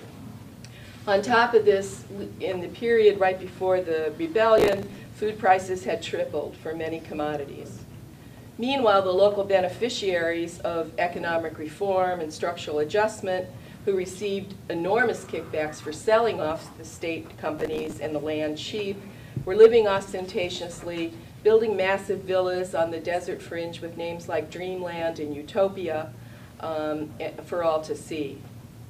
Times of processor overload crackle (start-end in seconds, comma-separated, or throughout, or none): 4.58-5.08, 17.59-17.96